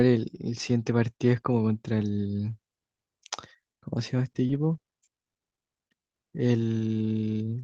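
From 4.23 to 5.81 s the speech shows repeated packet loss (robotic sound): around twenty brief dropouts, none longer than 40 ms, each patched by extending the preceding sound. Concealment covers about 28% of that stretch, giving a choppy texture with fragments missing.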